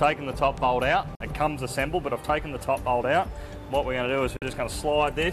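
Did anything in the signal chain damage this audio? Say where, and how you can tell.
Yes. The sound briefly drops to silence twice, from 1.15 to 1.21 s and from 4.37 to 4.42 s, with a 3 ms fade at each edge. This is a digital broadcast dropout: the receiver muted over about 48 ms of bad frames, consistent with two lost frames.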